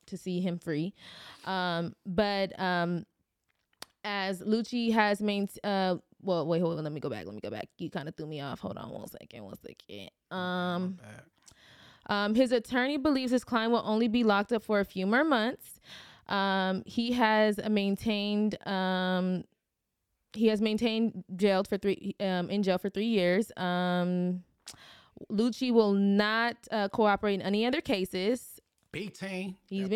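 No technical faults can be heard anywhere in this speech recording.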